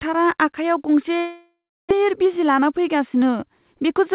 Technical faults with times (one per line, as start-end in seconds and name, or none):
1.18-1.93 long network dropout
2.01-4.13 jitter buffer speed-up